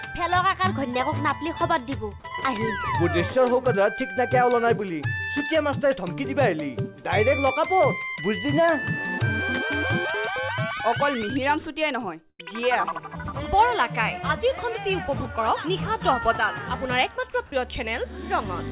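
At 2.2 to 2.24 s, the sound briefly gives way to steady noise for 40 ms. This is sound dropped by the voice detector, which likely mistook a quiet moment for background. Comfort noise fills the gap, and about 20 ms of real sound is lost.

At 12.3 to 12.41 s comes a burst of packet loss. About 80 ms of audio arrived too late or not at all. The receiver extended the last sound over 87 ms, fading it as the gap went on. The audio then resumes further on, with that stretch missing.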